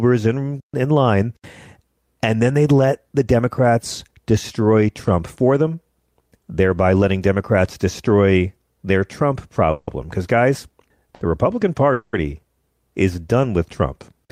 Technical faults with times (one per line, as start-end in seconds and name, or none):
9.71-9.89 call audio freeze
11.15-11.23 short stall from a late packet
11.93-12.15 call audio freeze